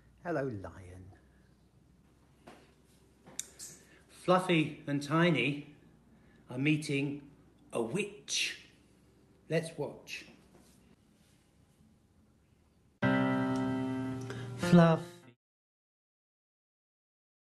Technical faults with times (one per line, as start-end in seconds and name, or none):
none